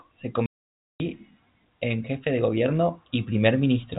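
From 0.46 to 1.0 s the speech drops into a dead hole of 0.54 s with hard edges at both ends. This is packet loss filled with silence: a run of packets never arrived and the receiver played nothing, a gap that fits 20 ms packets, over a narrowband G.711 telephone line.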